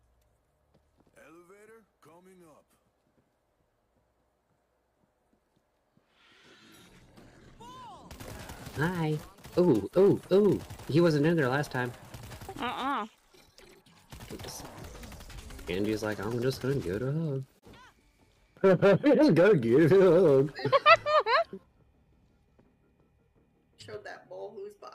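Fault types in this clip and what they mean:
Adaptive stream at a lower bitrate: from 2.18 s to 8.18 s codec artefacts rise, switching abruptly with no gap. The stream stepped down to a lower-bitrate version, which fits HE-AAC near 48 kbit/s replacing 96 kbit/s AAC.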